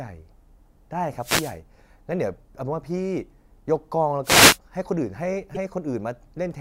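A speech clip with two kinds of fault. Twice the radio link of an analogue FM wireless microphone fades, as reflected copies of the signal arrive out of step and partly cancel at the receiver, giving a wireless microphone noise hit from 1.17 to 1.58 s and again from 4.23 to 4.58 s. As the carrier weakens, the receiver's own noise rises through the audio, so each hit sounds like a brief swish of static over the speech, lasting about 0.4 and 0.35 s. Later, a short stretch of damaged data in the compressed stream hits between 5.54 and 5.57 s. The decoder meets bytes it cannot read as a valid frame, loses its place and hunts for the next frame header, and what comes out in those few tens of milliseconds is a quick squawk or blip.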